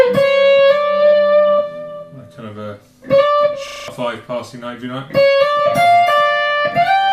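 System hang loop at 3.68 to 3.88 s: a frozen computer or driver left the hardware replaying one 40 ms buffer five times, a steady 25 Hz buzz.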